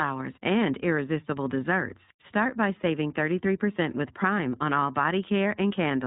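Throughout the speech, the iLBC codec cuts the band: nothing above 3.8 kHz survives, so the sound is dull and boxy. Each frame's excitation is coded independently, giving a plainly audible rough, synthetic edge, which fits 20 ms frames at about 15.2 kbps.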